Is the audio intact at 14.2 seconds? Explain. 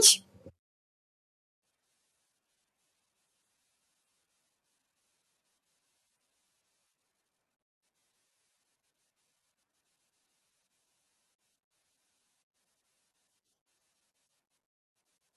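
No. Throughout the clip, including 14.2 seconds, there is a wrong sample rate fault: the speech is played back faster than it was captured, with no conversion, consistent with audio recorded near 22 kHz played at 32 kHz. Speed rises 1.45 times and pitch about 6.5 semitones, so the speech sounds high and hurried.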